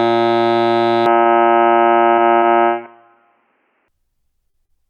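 A music clip in which the top end collapses from 1.06 s to 3.88 s. Nothing above about 3.1 kHz survives, so the sound turns dull and boxy. It changes without any gap at the switch and with no obvious change in level, and it returns to full bandwidth at 3.88 s. A quiet new background noise sits well below the music. The likely cause is an input switched to a poorer device, such as another microphone or a headset's call profile, whose narrower band and own noise take over for that stretch. Inside that section, from 1.21 s to 1.32 s, there is a short stall from a late packet. The last sound is held for about 43 ms while the receiver waits, then playback resumes from the same point with nothing lost. This shifts the timing by 43 ms and gives a brief sustained hold with a slight buzz or dip. Four short concealed packet losses follow, at 2.14–2.21 s, 2.38–2.45 s, 4.50–4.57 s and 4.66–4.84 s. 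Each drops about 40 ms of audio, and the receiver bridges the gap by extending the preceding sound for 31 to 43 ms before blending back. These are heard as quick smears or wobbles. The last one also stretches its section by a few milliseconds.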